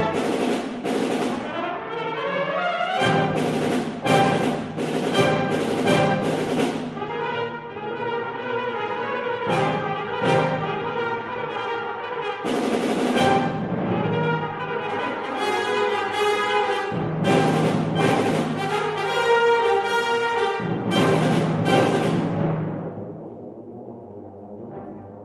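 No technical faults are audible.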